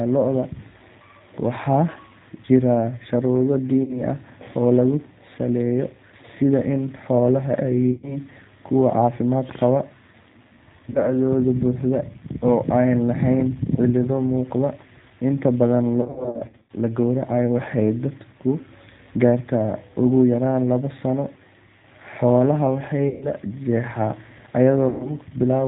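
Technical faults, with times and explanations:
Throughout, G.729 codec: the audio is rebuilt at 8 kbit/s from a vocal tract filter, pitch predictor and sparse pulses, so nothing above 4 kHz survives and speech sounds rough and synthetic. The grainy buzz, not just missing treble, separates it from simple band-limiting.
3.84–4.00 s, 7.92–8.18 s (just before "kuwo caafimaad"), 10.90–11.10 s, 16.01–16.71 s, 23.09–23.29 s and 24.89–25.15 s, VoIP packet loss concealed by the speech codec: about 40, 100, 50, 360, 120 and 110 ms of audio went missing. At 7.92 s the loss is scattered over 120 ms, and at 16.01 s over 680 ms with no gap longer than 60 ms. Each time the decoder stretches the last pitch and filter into a fading buzzy tone or coloured noise, and speech stays weak or distorted briefly afterwards. That smeared tail, rather than a silent hole or click, sets it apart from a simple dropout.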